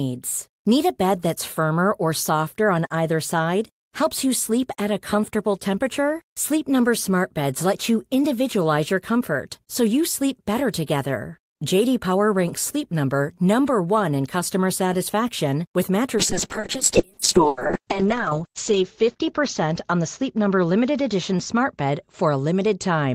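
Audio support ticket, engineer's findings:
Call bitrate drop from 16.16 s to the end: speech goes rough and muffled, top end falls from 20 kHz to 8 kHz, which fits the encoder starving near 6 kbps.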